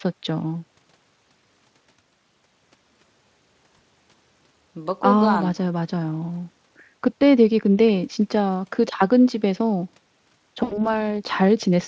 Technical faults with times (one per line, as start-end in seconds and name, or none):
3.77-3.80 VoIP packet loss concealed by the speech codec
10.63-11.01 VoIP packet loss concealed by the speech codec